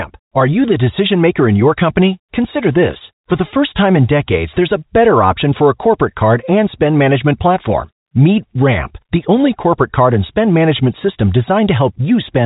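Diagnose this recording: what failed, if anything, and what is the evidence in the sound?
Nothing failed in this recording.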